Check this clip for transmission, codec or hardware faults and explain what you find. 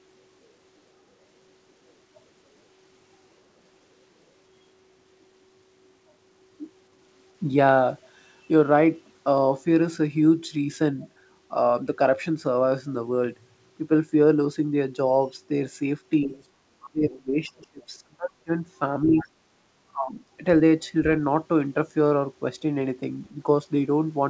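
Two echo-cancellation faults appear in the second half. The audio itself stops at 8 kHz, which fits a G.722 call path at 64 kbps.

Speech suppressed in double talk: the talker's level sinks sharply at 16.25–16.33 s, 16.79–18.52 s, 19.04–19.25 s and 19.91–20.2 s. The two short dips fall by about 10 dB, and the two longer ones fall by roughly 25 to 30 dB, nearly cutting the talker out. The likely cause is an echo canceller that couldn't tell the near talker from loudspeaker echo and attenuated both.

Other side's voice leaking through: a faint second voice surfaces briefly at 16.33–16.44 s and again at 19.18–19.26 s, some 20 to 25 dB below the talker. It likely comes from far-end audio played on the talker's loudspeaker that the canceller failed to fully subtract from the microphone signal.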